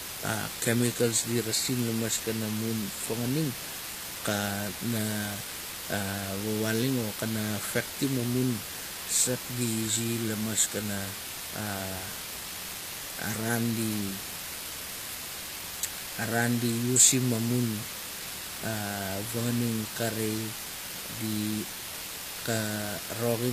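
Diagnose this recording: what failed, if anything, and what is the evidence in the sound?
The sample-format conversion stage reduced the speech to low bit depth with dither, leaving about 6 bits. Dither was added before rounding, so the quantisation error became a steady white hiss rather than gritty distortion. Throughout the clip that hiss sits nearly as loud as the speech itself, even and constant in pauses and under syllables alike, with no crackle or breakup tracking the level.

The codec stage most likely ran HE-AAC compression at a low rate, consistent with around 24 kbps. The sound stops dead at 14.9 kHz, and the treble below that is plainly damaged: bright but not faithful, with s sounds and other sibilance coming out gritty, metallic or lispy across the whole clip. That fits spectral band replication, where upper bands are copied up from lower ones and shaped coarsely, so harmonics fail to line up across the crossover.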